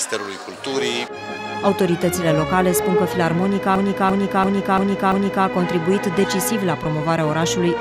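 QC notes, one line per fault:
3.76–5.46 s, system hang loop: a single 341 ms slice of audio repeats exactly five times, a stuttering chop at about 2.9 Hz. The system froze while the audio hardware kept replaying the same ring buffer, which fits a 16384-sample buffer.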